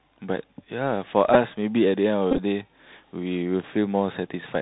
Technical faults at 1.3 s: Bluetooth CVSD headset codec; Bluetooth headset packet repeated

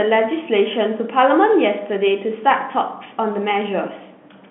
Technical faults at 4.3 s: none

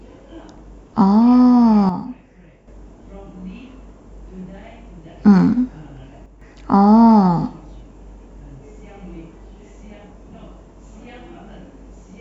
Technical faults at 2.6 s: sudden gain jump

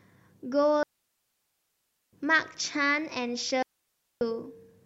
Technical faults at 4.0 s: digital wireless dropout

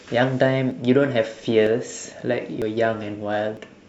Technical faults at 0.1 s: none

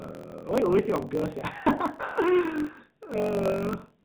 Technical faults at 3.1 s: AMR narrowband mobile codec; block size mismatch (truncated)

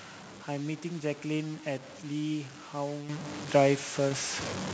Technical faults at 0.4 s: low bit depth without dither

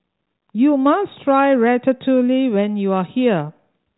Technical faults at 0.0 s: none

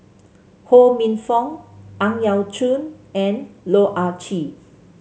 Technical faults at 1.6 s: none

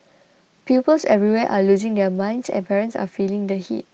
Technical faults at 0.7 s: lost packet rebuilt from error correction

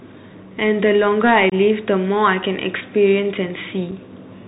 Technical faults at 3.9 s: Bluetooth CVSD headset codec; unconcealed Bluetooth headset packet loss

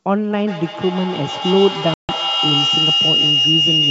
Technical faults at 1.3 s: feedback howl

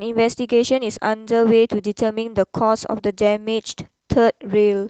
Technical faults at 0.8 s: none

